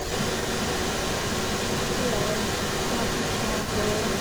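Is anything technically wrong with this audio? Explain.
Yes. An echo leak runs through the whole clip, from 0.0 s to 4.2 s. A second copy of the speech trails the original by about 414 ms and arrives at roughly the same loudness, so the two overlap. The likely cause is a far end playing the call over a loudspeaker whose echo canceller failed to subtract the returned signal, letting the microphone send it straight back.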